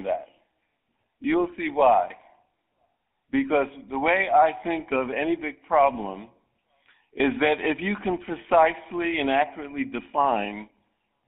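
From start to finish the speech sounds buzzy and gravelly, with a plainly audible rough grain and a thin, narrow tone that loses low warmth below about 250 Hz and all brightness above 3.5 kHz. This is GSM full-rate codec damage. The codec reduces the voice to a vocal-tract model driven by a regularly spaced pulse excitation, keeping only a fraction of the excitation detail, which fits a 13 kbps GSM full-rate stream.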